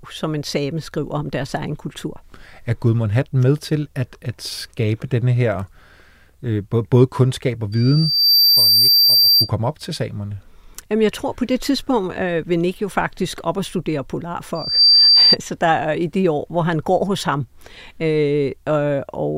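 Loudspeaker feedback squeal at 7.72–9.50 s and 14.55–15.36 s: the mic catches its own speaker, and a 4.7 kHz tone swells up, faster and louder the second time.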